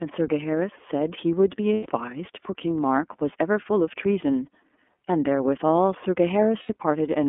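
iLBC codec coding runs through the whole of this speech recording. The audio is confined to a narrowband telephone line of roughly 250 Hz to 3.4 kHz, and each frame's excitation is coded independently, giving the voice a plainly audible rough, synthetic edge. The texture fits iLBC's 30 ms frame mode. Lost iLBC frames interrupt it twice, from 1.74 to 1.87 s (120 ms) and from 6.63 to 6.69 s (60 ms). Over each gap the decoder repeats the last pitch cycle blended with noise, so a held, buzzy vowel stands in place of the missing sound. Clear speech returns almost immediately because the next frame decodes on its own.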